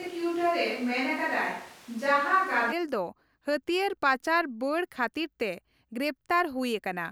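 A speech recording that opens sounding roomy and hollow, with thin low end and a noise bed sitting roughly 25 dB below the voice, while the overall level stays much the same. This character is already present from the first moment and stops abruptly at 2.71 s, when the sound turns close and full. That sudden change is the mark of a switch to a distant microphone, likely because the close microphone's signal was missing for that stretch.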